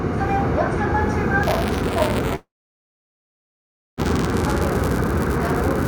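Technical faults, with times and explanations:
1.43–5.88 s, buffer tearing: a steady robotic buzz at 188 Hz rides on the sound to the end, which fits a 256-sample buffer. Writer and hardware cross inside each period, so a small slice holding audio about 10 ms old joins hard every cycle.
2.35–4.00 s, long network dropout: about 1.62 s of audio is missing. The last sound briefly carries on as a fading buzz or hiss, then roughly 1.5 s of silence follows before audio resumes further on, likely because packets stopped arriving and the receiver concealed the gap.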